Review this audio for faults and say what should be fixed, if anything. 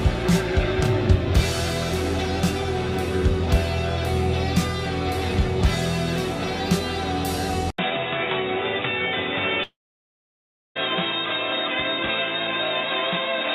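Input switched to a poorer device, from 7.70 s to the end. An 80 ms silence is followed by duller, boxier sound with nothing above 3.8 kHz, a level about 5 dB lower, and a new noise floor roughly 40 dB below the signal. This is most likely the recorder changing to another microphone or to a headset's narrowband call profile mid-take, which brings its own bandwidth, gain and noise. To prevent it, lock the input device and disable automatic switching before recording.

Long network dropout, from 9.63 s to 10.77 s. About 1.12 s of audio is gone. The last sound is stretched into a brief fading buzz, then roughly 1.02 s of silence follows before the audio resumes further along, without the lost portion. This pattern likely comes from packets failing to arrive while the receiver concealed the gap and then gave up. To prevent it, record locally on the sending end or use a more stable connection with a larger jitter buffer.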